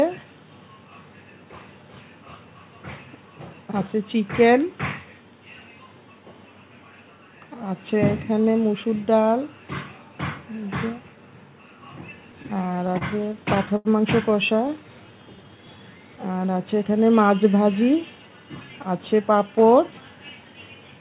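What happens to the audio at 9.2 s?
Nothing goes wrong at 9.2 s: the audio runs on intact through the call path, with the narrowband telephone tone that leaves nothing above 4 kHz.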